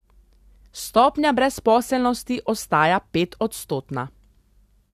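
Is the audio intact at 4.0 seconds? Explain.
Yes, at 4.0 seconds the speech plays through intact, with no dropout, click, distortion or other fault at that moment.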